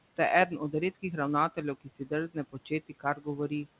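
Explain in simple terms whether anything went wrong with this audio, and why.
Three parts of the speech were cut by the noise suppressor. This happened from 1.81 to 2.11 s, from 2.52 to 2.71 s, and from 2.89 to 3.27 s. Each time, the suppressor mistook some speech for background noise and turned it down. Only short pieces were hit, a tenth to a fifth of a second each. Those sounds come out faint or swallowed. The dip is strongest in the first stretch.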